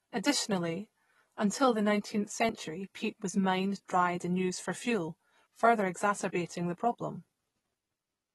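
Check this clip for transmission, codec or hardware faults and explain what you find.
Two faults are audible in this speech.

Throughout, the sound is dull and smeared with a fizzy texture, and nothing is present above 12 kHz. This is likely AAC compression at a low bitrate around 32 kbps, which lowers the cut-off and coarsely quantises the spectrum.

At 2.49 s, just before "peat was mined dried", there is a tiny skip of roughly 20 ms. This is audio missing between chunks, likely lost while one processing block closed and the next opened.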